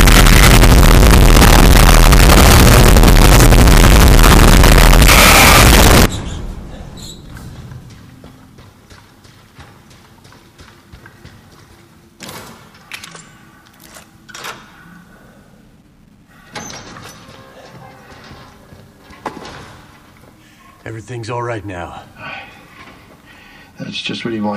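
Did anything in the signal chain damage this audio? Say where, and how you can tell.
Yes. From 0.0 to 6.06 s the sound is harsh, very loud distortion, with quiet passages as loud as the rest. The likely cause is signed and unsigned mixed up in 8-bit sample-format conversion, which flips the top bit.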